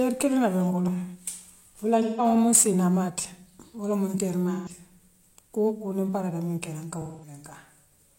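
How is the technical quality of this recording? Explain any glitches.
The recording has two kinds of technical fault: a stretch of clock-related roughness early on and three brief concealed dropouts in the speech.

Sample clock jitter, 0.77 to 3.19 s: the converter's timing wobbled by a couple of microseconds, mistiming samples and adding a hiss-like roughness, roughly 25 dB below the speech, strongest on loud, bright sounds.

AAC frame loss with concealment, at 2.01 to 2.25 s (170.7 ms), 4.53 to 4.70 s (128.0 ms) and 7.01 to 7.33 s (213.3 ms): the decoder rebuilt missing frames from the last good spectrum, leaving short smeared, noisy, phasey patches.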